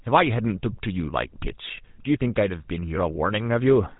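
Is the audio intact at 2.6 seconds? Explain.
No. At 2.6 seconds the speech carries GSM full-rate codec damage, and that damage runs through the whole clip. This codec models the vocal tract and feeds it a coarse train of regular pulses, keeping only a third of the excitation detail. Nothing above 4 kHz survives. The result is a plainly audible buzzy, gravelly roughness on the voice, which fits 13 kbps GSM full-rate coding.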